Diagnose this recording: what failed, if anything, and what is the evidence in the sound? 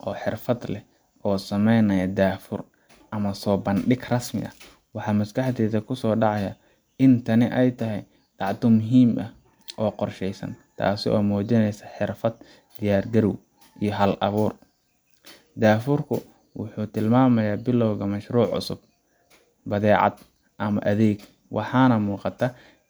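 Nothing failed here: I listened for trouble at every stage of the chain and found nothing to report in this speech recording.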